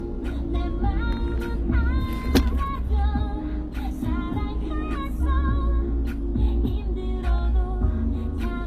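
Low-bitrate audio saved at a high bitrate, throughout: nothing is heard above 14.9 kHz, likely because a very low-bitrate encoding was re-saved as a large MP3.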